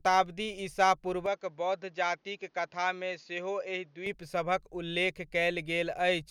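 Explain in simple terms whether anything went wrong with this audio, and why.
Between 1.26 and 4.06 seconds the speech suddenly turns duller and a little quieter, with a faint new background hiss, then returns to its earlier clarity. Nothing above about 7.1 kHz gets through in that stretch, and there is no gap at either change. This points to an input switched to a poorer device, most likely the recording jumping to a different, lower-quality microphone and then back.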